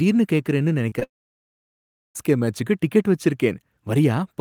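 Around 0.89 to 0.93 s and again at 0.99 to 1.03 s there's short concealed packet loss: about 20 ms each got patched over, leaving quick smeary wobbles. Right after, from 1.03 to 2.17 s, the sound cuts out for just over a second, mostly dead silence, until "மேச்சுக்கு டிக்கெட்" comes back. That's likely a long network dropout, with the missing audio simply gone.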